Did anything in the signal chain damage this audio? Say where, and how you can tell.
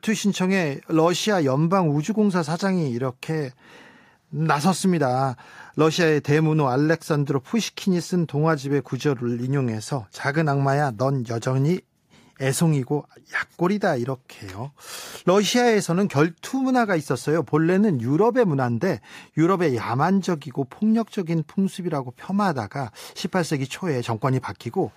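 No, nothing along the way seems to have damaged this speech recording; there's no point in the chain where anything audibly goes wrong.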